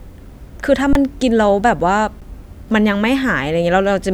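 Speech with two underruns with held sample: the sound freezes flat from 0.93 to 0.95 s and again briefly at 2.21 s, fitting 1024- and 512-sample buffers. Unlike a dropout to silence, the waveform holds its last value, so each gap starts nearly clicklessly, and roughly 20 and 10 ms of live audio went missing.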